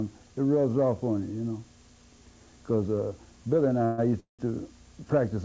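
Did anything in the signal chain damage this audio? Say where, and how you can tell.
Yes. At the network and jitter-buffer stage there are two call audio freezes, at 3.85–4.00 s and 4.20–4.41 s. Packets were likely delayed and the buffer ran empty, so the last sound was stretched into a fading buzz. The second one falls into about 110 ms of silence. Each time, the audio then resumes where it stopped, with nothing lost but arriving later.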